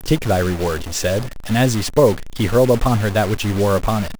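A data bit in the conversion path is likely stuck at a fixed value, a stuck bit that holds steady for the whole clip while the rest of the samples change. Every sample where that bit should differ is pushed off by a fixed step of around -25 dBFS, so the speech is coated in harsh, buzzy distortion from start to finish, and the pauses between phrases fill with a noise floor at about that level instead of falling silent.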